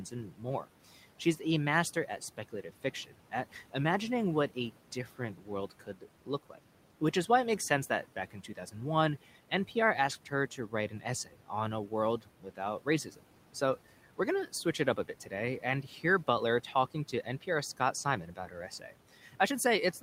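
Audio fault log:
0.11–0.66 s, 1.95–3.74 s (ending just before "imagining what a"), 5.18–6.59 s (just after "imagining what a"), 10.25–13.55 s, 15.06–16.04 s (after "switch it up a"), 16.74–19.36 s: speech cut by the noise suppressor. The suppressor mistakes soft consonants and word endings for the room noise, which sits about 20 dB below the speech. It pulls them down by about 9 to 12 dB, so they sound swallowed. The affected moments add up to a fraction of a second in each stretch. On a waveform the envelope dips at word tails, and on a spectrogram the high-frequency consonant energy thins into the noise floor.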